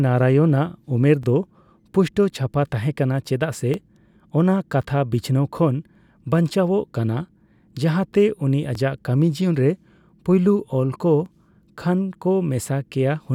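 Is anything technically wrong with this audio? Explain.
Yes. Overlapping chunks cause a click or stutter at 1.23, 3.74, 6.25, 8.75 and 11.26 s, once every 2.5 seconds through the speech. The audio was handled in 2.5-second blocks, and each block begins about 6.5 ms before the previous one finished, so that sliver plays twice at every join. The doubled fragment breaks the waveform's continuity, heard for instance right after "ᱡᱟᱦᱟᱛᱮ ᱩᱱᱤ" and again just before "ᱠᱷᱟᱱ ᱠᱚ".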